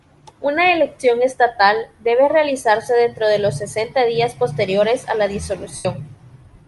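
Right from the start the speech has a breathy, grainy edge, with the top end sounding thinned out and filled with hiss instead of real detail. That's likely Bluetooth LC3 compression: the LE Audio transform codec throws away much of the upper spectrum and patches it with shaped noise. The damage is plainly audible here, which fits a stream running around 48 kbps with short 7.5 ms frames.

Then at 5.76 s, just after "días posteriores a la", there's a stretch of lost LE Audio frames running to 5.85 s, about 90 ms in all, which fits a dozen missing 7.5 ms frames. The decoder keeps replaying the last spectrum with scrambled signs and fades it down as the gap goes on. So the sound there smears into a noisy blur that sinks toward silence before normal audio picks back up.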